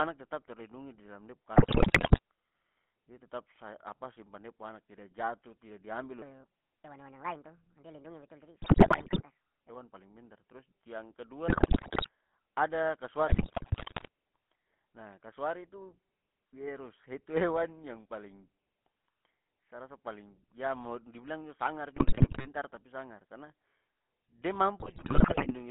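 GSM full-rate codec damage runs through the whole recording. The speech has the gravelly, buzzy roughness of a coder that models the vocal tract and drives it with a sparse, regularly spaced pulse excitation, which fits a 13 kbps full-rate stream. The band is cut to a telephone line of about 150 Hz to 3.4 kHz, so the lows are thin and there is no air on top. The damage is plainly audible.

GSM bit errors first hit from 1.56 to 2.19 s. Corrupted bits reach the decoder's filter, pitch and gain parameters, so individual frames come out with a warped spectrum or a sudden jump in level. The speech breaks into squawks, pops and gargling. The same burst damage returns at 8.62 to 9.23 s, 11.48 to 12.09 s, 13.28 to 14.08 s, 21.96 to 22.48 s, and 24.80 to 25.55 s.

A section at the wrong speed runs from 6.22 to 9.69 s. It plays 1.43 times too fast, so pitch and tempo rise together by roughly seven semitones, and the speech turns high and hurried before snapping back to normal. 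The likely cause is a segment being resampled or played against the wrong clock. The bit-error burst at 8.62 s falls inside this sped-up stretch.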